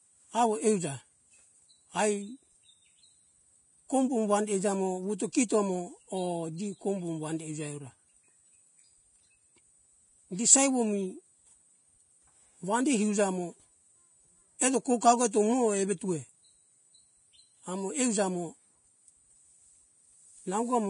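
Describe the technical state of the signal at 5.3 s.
At 5.32 to 5.35 s a pre-echo sits just ahead of a sharp speech onset. A short hiss, about 22 ms long, smears forward into the quiet gap before the attack, which sounds softened and blurred. The codec spread its quantisation noise across the whole transform block, including the near-silence before the loud part. On a waveform, low-level fuzz rises before the onset instead of a clean jump from silence. A spectrogram shows a thin broadband smear leading the transient.

The same moment carries the grain of Vorbis compression that runs through the whole recording. Nothing is present above 10.5 kHz, and the remaining treble sounds hissy and rough. This is likely the result of heavy lossy coding at a low bitrate, around 28 kbps, where the residue over the spectral floor is quantised so coarsely that fine high-frequency detail becomes noise-like texture. 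On a spectrogram this shows as a flat ceiling at 10.5 kHz with patchy, speckled energy beneath it in the upper bands.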